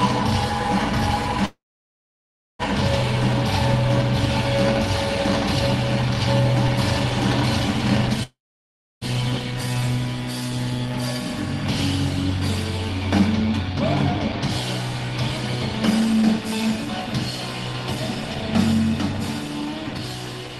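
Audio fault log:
1.45–2.62 s and 8.23–9.04 s, call audio freeze: a brief fading fill, then silence, likely from delayed packets; audio resumes where it stopped, so nothing is skipped, unlike a dropout.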